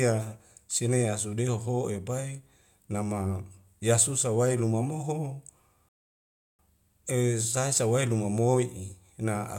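At 5.89 s the player ran dry of downloaded audio and halted playback until more data came in, a rebuffering stall. After "yasusa wai luma moho" the speech drops to silence, holds there until 6.59 s, then picks up with "e sai sa wai" exactly where it paused. No speech is skipped or repeated; the gap simply inserts about 0.70 s of dead air into the delivery.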